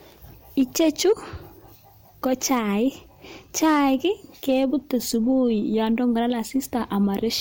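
Hard clipping hits speech peaks at 0.60–1.12 s, 3.63–4.05 s and 4.49–4.94 s, overdriven by about 2, 2 and 1 dB. It gives brief crackle, flat-topped waveform peaks and high-frequency smearing on the spectrogram.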